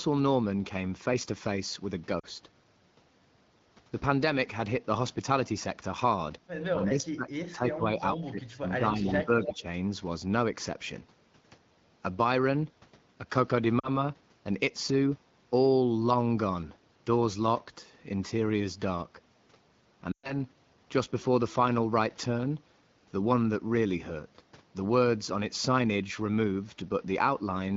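Lost AMR speech frames come first, at 2.19 to 2.25 s: radio errors corrupted about 40 ms of data, which fits two 20 ms frames, and the decoder stretched the last good frame with falling gain, leaving a short warble before the speech resumes. From 6.75 to 9.65 s comes speech suppressed in double talk, likely the echo canceller muting this talker while both sides spoke. The level dips in pieces by about 25 dB at the deepest, and roughly two seconds of the span is affected. Inside that span are two bursts of echo leak, at 9.08 to 9.25 s and 9.43 to 9.54 s. A loudspeaker path is likely letting its own pickup back through, giving a copy delayed by 287 ms: about 15 dB under the speech the first time, then about 5 dB under. More lost AMR speech frames follow. At 13.79 to 13.89 s, 40 ms goes missing and is bridged with a brief wobble. At 20.11 to 20.33 s, 120 ms is lost, enough for the concealed sound to drop to near silence within two frames, as it does in this HD Voice wideband stream, before the speech returns weak or rough for a moment.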